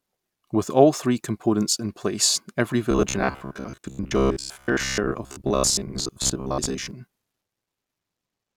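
From 2.91 to 6.91 s, new audio likely arrived too seldom, so playback kept looping a buffer of about 15 ms for roughly half the time. The result is robotic sound from repeated short buffers: a rigid, metallic 66.8 Hz buzz loosely tracking the speech.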